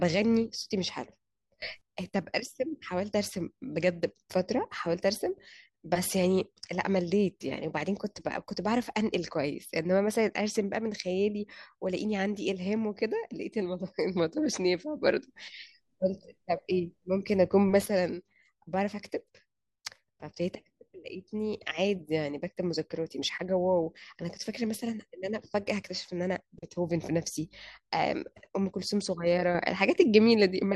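Speech whose level, background noise included, abruptly leaps up by about 20 dB at 1.62–1.81 s, then by about 6 dB at 15.02–17.86 s and from 29.55 s to the end: sudden gain jumps, likely digital gain applied instantly without any ramp.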